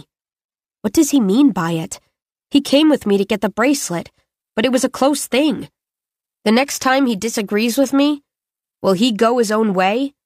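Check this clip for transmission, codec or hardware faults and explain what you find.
There's one transmission fault here. From 3.68 s to the end, the adaptive stream drops to a lower bitrate: the treble suddenly turns synthetic with no gap, which fits a switch from 96 to 40 kbit/s.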